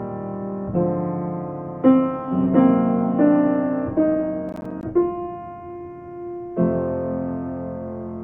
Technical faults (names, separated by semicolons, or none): processor overload crackle